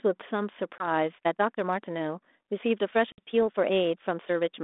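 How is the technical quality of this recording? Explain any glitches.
The recording is a narrowband telephone call, band-limited to roughly 250 Hz to 3.6 kHz, with light ADPCM coding noise consistent with 32 kbit/s G.726. It has two dropouts and a sped-up section.

Packet loss on the ADPCM call occurs between 0.78 and 0.88 s, where about 20 ms of audio is missing, which fits a single lost packet. A longer gap of about 60 ms, roughly three packets, falls between 3.12 and 3.20 s. Each loss leaves an abrupt silent hole. Because ADPCM transmits only differences from an adaptive prediction, the decoder's predictor and step size lose sync with the sender's. The speech therefore resumes slightly distorted before it recovers.

The time-stretched section runs from 1.19 s to the end. The pace jumps to about 1.37 times normal speed while the pitch stays unchanged. This is likely caused by software compressing the audio to fit a length, discarding short segments to preserve pitch. 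The result sounds rushed.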